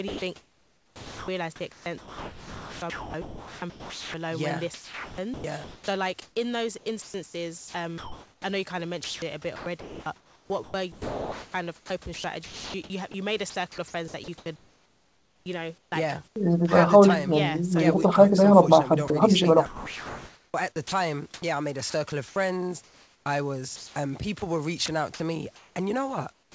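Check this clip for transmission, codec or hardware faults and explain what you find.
Yes, there are transmission faults: the speech repeatedly breaks up into steady synthetic hiss, with one brief dropout and a clipped start right at the end. Room noise sits about 40 dB below the speech, and the call path shows a ceiling at 8 kHz, consistent with G.722 wideband coding at 64 kbps.

Sound chopped by the voice detector, from 0.08 to 4.14 s, 4.74 to 8.44 s, 9.04 to 16.36 s and 19.66 to 25.76 s: the speech stutters, and quiet syllables and word edges give way to a smooth, featureless hiss before the real sound returns. Within each stretch about 1.8 to 3.7 s is replaced. The likely cause is the sender's voice detector flipping on and off, so the receiver fills each gap with comfort noise.

Sound dropped by the voice detector, at 19.08 s: a 20 ms sliver of sound vanishes and is replaced by the same steady noise. 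The likely cause is the detector briefly judging quiet speech to be background and halting transmission, with synthetic noise played in its place.

Comfort noise in place of the background, from 26.32 to 26.55 s: the natural room ambience is replaced by a plain, even hiss about 15 dB quieter, sitting roughly 37 dB below the loud passages, so the background seems to sink and flatten. This is likely discontinuous transmission: the sender stops sending once it hears no speech, and the receiver generates noise shaped like the background.

Onset clipped by the voice detector, from 26.51 to 26.55 s: the final sound begins abruptly, with its first 40 ms missing and the soft attack replaced by comfort noise. The likely cause is the detector reacting late to the returning sound, so its beginning was never transmitted and the receiver filled that moment with synthetic noise.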